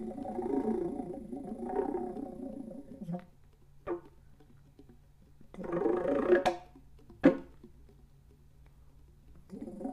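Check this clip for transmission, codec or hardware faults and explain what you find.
No transmission, codec or hardware fault can be heard anywhere in these sounds, and the signal stays continuous and consistent throughout.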